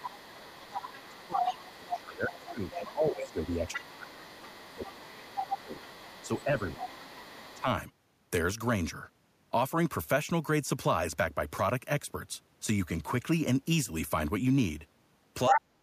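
From 0.0 to 7.61 s, the other side's voice leaks through faintly, well below the talker. The likely cause is residual loudspeaker echo that the canceller left in the microphone. Overlapping it, from 0.71 to 7.66 s, the talker's speech is suppressed in double talk. For around five seconds in total, the voice dips by up to roughly 20 dB and thins out. The canceller likely turned everything down while both sides spoke.

At 15.47 to 15.61 s, a short scrap of the other side's voice leaks through again, slightly louder than the talker. From 15.49 to 15.69 s, the talker's speech is suppressed in double talk once more. It drops by roughly 30 dB, almost cutting out.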